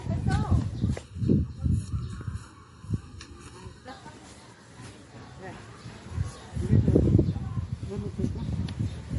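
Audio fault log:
Throughout: transcoding between lossy codecs. Nothing above 11.2 kHz, plus smeary, swirly artefacts of more than one flavour stacked together. The likely cause is a chain of low-bitrate MP3, then AAC, then MP3 again, each codec baking the last one's damage into its own.
1.03 to 3.88 s: channel delay (comb filtering). The sound goes hollow and phasey here. One channel lags the other by well under a millisecond, so when they're summed to mono the shared content cancels at evenly spaced notches, the first around 700 Hz.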